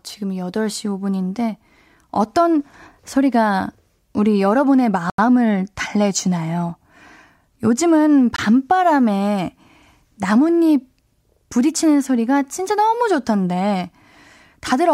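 At 5.10 s and 8.36 s the speech cuts to a block of digital silence, 85 ms and 21 ms, pointing to unfilled output buffers; each time the sound cuts out and back with no fade.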